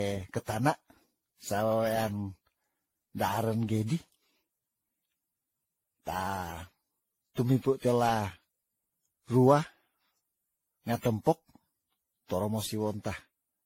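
Speech clip with generation loss running through its whole length. The sound is swirly and hollow, more smeared than a single lossy encode would leave it. Consonant attacks blur, and nothing is present above 16.6 kHz. The likely cause is repeated decoding and re-encoding, around ten passes, through a codec whose character points to AAC-LC at about 64 kbit/s. Each pass quantises on a shifted frame grid, so noise piles up.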